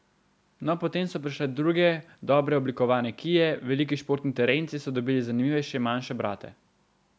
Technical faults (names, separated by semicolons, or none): none